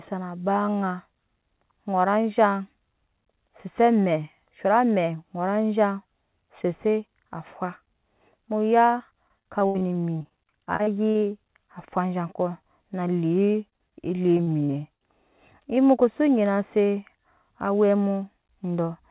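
Repeated packet loss hits the call three times: from 8.98 to 11.24 s, 13.52 to 13.93 s, and 14.37 to 15.02 s. Each gap, up to 80 ms, is patched by stretching the previous sound, so the speech turns choppy and robotic, with about a fifth to just under a third of each stretch concealed.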